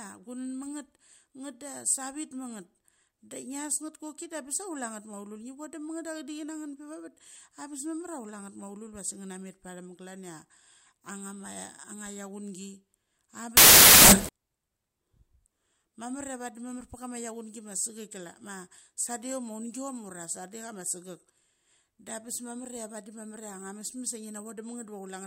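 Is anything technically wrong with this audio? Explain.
Yes, there's one clear problem. From about 13.57 to 14.29 s, roughly three quarters of a second, the speech is replaced by a burst of loud, harsh broadband noise. That's samples built from the wrong bytes: the reader is pairing up each sample's bytes incorrectly, whether shifted by a byte or in swapped order, so the jittery low-order bits end up acting as the big part of every value.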